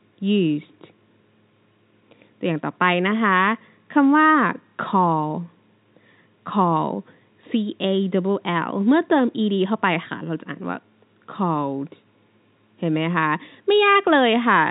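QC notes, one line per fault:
The speech carries the band-limit of fixed-line telephone coding, with nothing above about 3.8 kHz, which fits G.711 A-law at 64 kbps, and any quantisation noise stays faint and tracks the signal level.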